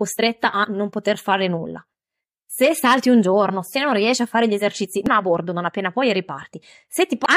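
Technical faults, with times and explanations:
0.63–0.65 s, 5.06–5.08 s and 7.25 s: damaged data in a compressed stream. Each is a brief glitch of about 20 ms or less. The first comes just before "non poter fare nulla". The second sits between "a fare gli esercizi" and "a bordo". Corrupted bytes in the encoded speech made the decoder misread those frames and lose sync until it found the next valid frame header. The garbled output in that gap is heard as a short chirp or blip.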